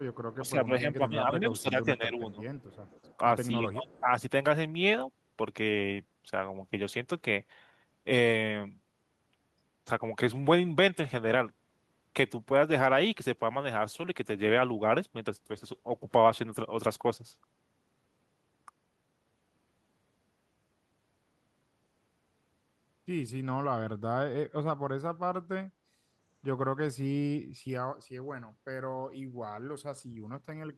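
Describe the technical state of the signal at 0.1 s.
Around that moment there is an echo leak, from 0.13 to 0.17 s. A faint, delayed copy of the speech comes back about 261 ms after the original. It sits roughly 30 dB below the talker, and it is a brief scrap rather than a clear repeat. The likely cause is a loudspeaker on one side whose echo canceller let part of the microphone pickup slip back into the call.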